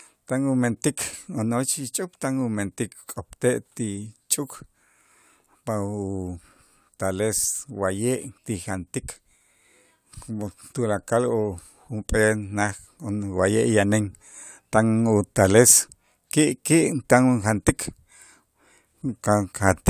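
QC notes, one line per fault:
No faults found on this speech clip; nothing to flag.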